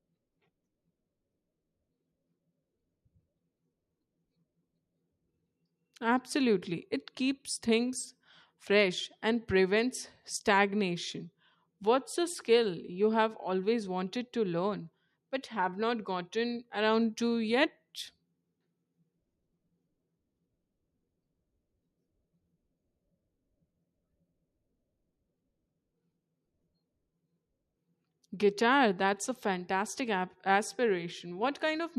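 No technical faults occur at any point in the speech, so there is nothing to describe in time order.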